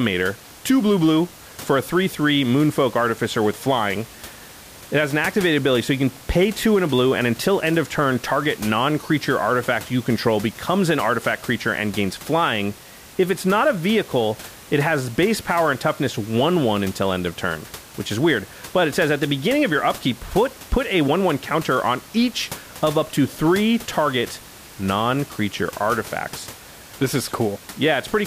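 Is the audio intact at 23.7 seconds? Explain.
Yes, the speech at 23.7 seconds is intact, with only the room's own background noise sitting about 20 dB below it.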